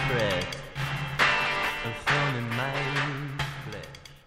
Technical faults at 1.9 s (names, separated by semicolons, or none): none